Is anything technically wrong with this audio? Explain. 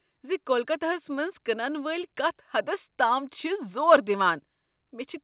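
No, nothing stood out as a fault on listening to this speech, which comes over a call path that carries nothing above 4 kHz.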